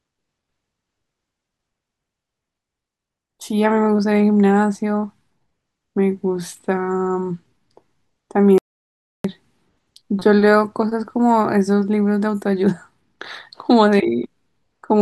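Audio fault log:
8.58 to 9.24 s, audio dropout to silence: the speech stops abruptly mid-flow and returns just as abruptly after about 0.66 s of total silence, with no room tone underneath, so that stretch is lost. This likely comes from the input signal briefly failing while recording continued writing silence.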